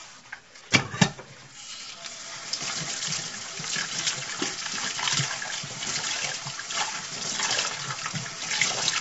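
From start to finish the sound has passed through a codec that spends too few bits on too-short frames, likely low-delay AAC compression of the AAC-ELD kind, at a rate that fits roughly 24 kbps. Its brief analysis windows cannot hold fine spectral detail, so the everyday sounds come out plainly rough and grainy, with a noisy fizz filling the gaps, and nothing survives above 7.8 kHz, leaving the top dull and cut off.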